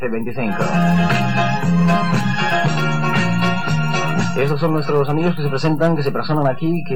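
DC offset runs through the whole clip, from the first moment to the last. The entire waveform sits displaced from the zero line by a fixed amount, so every sample carries the same constant added to it. That shift makes no audible tone of its own; instead it eats into headroom on one side of the waveform and appears as steady energy at the very bottom of the spectrum, at zero frequency, beneath the audio itself.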